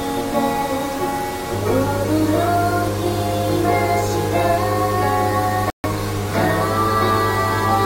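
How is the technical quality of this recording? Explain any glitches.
The recording has three clear technical problems: grainy quantization distortion throughout, a loud mains hum from 1.53 s onward, and one sudden dropout near the end.

Throughout the clip, quiet passages sound gritty and coarse, with an error that moves with the sound rather than sitting underneath it as a steady background. The noise is roughly 20 dB below the signal. The likely cause is low bit depth without dither: samples rounded to very few levels, consistent with about 5 bits.

From 1.53 s to the end, a steady low tone sits under everything. This is mains hum at 50 Hz, about 5 dB below the signal and so very prominent. Power-line current, typically from a ground loop or a nearby transformer, is coupling into the signal path.

From 5.70 to 5.85 s, the sound drops abruptly to silence for about 0.15 s, then resumes on time. 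This is a corrupt frame muted. Damaged compressed frames, fitting a run of about six, were rejected by the decoder, and the player inserted silence in their place.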